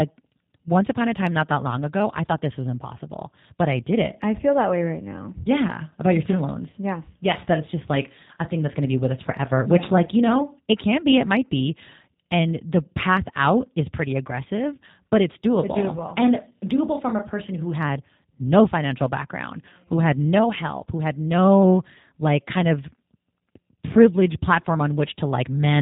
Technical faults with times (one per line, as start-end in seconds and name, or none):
0.00-25.82 G.729 codec
6.70-6.76 VoIP packet loss concealed by the speech codec